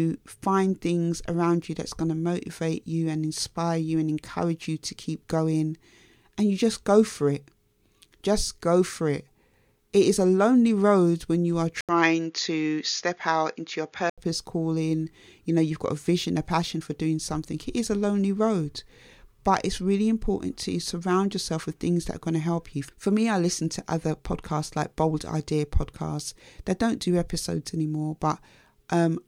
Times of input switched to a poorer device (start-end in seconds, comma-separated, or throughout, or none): 11.81-14.18